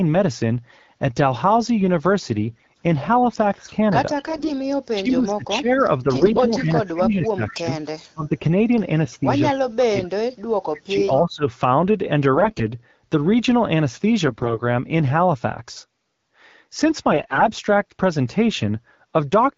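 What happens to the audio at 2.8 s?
AMR bit errors are still corrupting the speech at 2.8 s, at the tail of a burst from 2.50 to 2.82 s. That span fits about sixteen 20 ms frames. Roughly 15 percent of the weakly protected bits in each frame flip, so the excitation pulses land in the wrong positions and the fine pitch, gain and spectral values drift. Pitch and loudness stay roughly intact while the voice turns hoarse, scratchy and gargly, then the AMR wideband codec's 12.65 kbit/s sound returns.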